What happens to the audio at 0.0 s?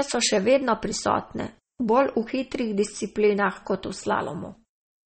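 From the very start at 0.0 s and throughout, the speech carries plainly audible damage, likely from MP3 compression at a low bitrate near 32 kbps: nothing remains above 8.4 kHz, and weak frequency lines flicker between frames, giving a watery, swirly texture. A spectrogram shows a flat ceiling and patchy, blotchy upper bands.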